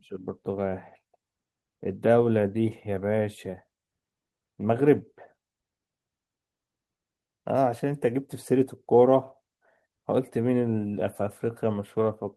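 Nothing goes wrong anywhere in this bit of speech, so there's no fault to point to at any moment.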